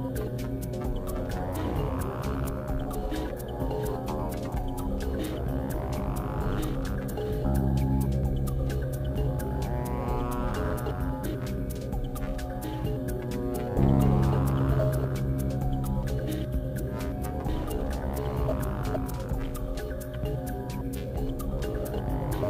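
Crude rate conversion runs through the whole clip. The pattern of error fits a change from 48 kHz to 44.1 kHz done by simply picking the nearest sample, with no filtering. The resulting timing errors repeat in a fixed cycle set by those two rates and create shifted, inharmonic copies of the sound itself, sitting roughly 30 dB below it. They come through as a gritty, inharmonic fizz that rides on louder and brighter passages.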